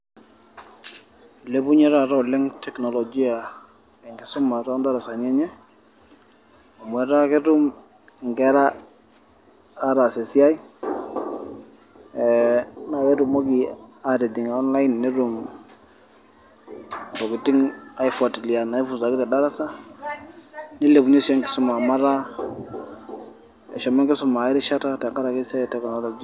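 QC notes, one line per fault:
Nothing stood out on listening to this speech clip.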